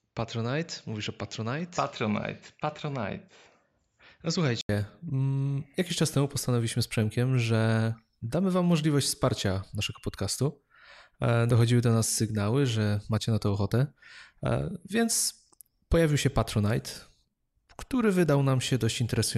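Until 4.69 s the speech sounds dull and slightly quieter, with nothing above 7.6 kHz. An 80 ms gap precedes "mm jakiś czas temu". The input likely switched from a poorer device.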